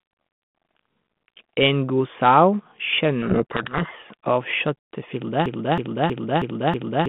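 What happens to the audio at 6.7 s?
At 6.7 s you're in the middle of a broken-record loop that starts at 5.46 s and runs to the end. A 0.32 s fragment repeats back to back five times, likely because the player or stream stalled and kept resending its last chunk, so the real audio there is gone.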